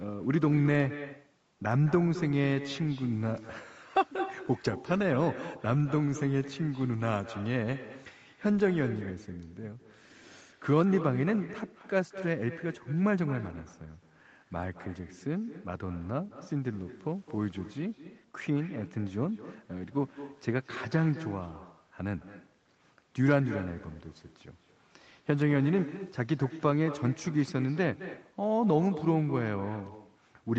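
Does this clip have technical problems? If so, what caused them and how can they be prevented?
Yes: echo with no canceller throughout, with the far-end loudspeaker returning the speech about a fifth of a second later, about 14 dB quieter, showing as faint delayed copies on a spectrogram. Turning on acoustic echo cancellation at the far end, or having that listener use headphones, prevents it.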